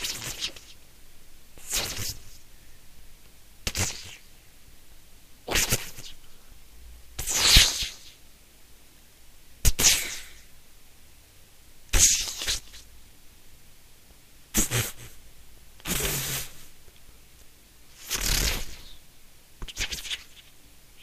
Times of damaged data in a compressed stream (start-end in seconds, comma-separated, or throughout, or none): none